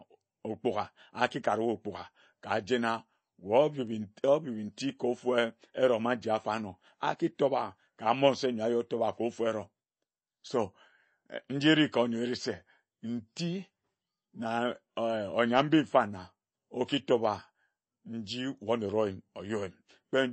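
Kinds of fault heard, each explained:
MP3 compression: The speech was likely squeezed through a low-bitrate MP3 encoder, around 32 kbps, which cut the treble and dropped weak frequency detail. Nothing remains above 8.4 kHz, so the speech sounds dull, and plainly audible watery, swirling artefacts run throughout.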